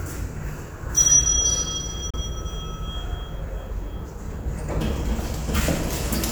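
At 2.10 to 2.16 s the sound cuts to silence, then resumes further along, a gap likely from a Bluetooth dropout, consistent with two lost packets.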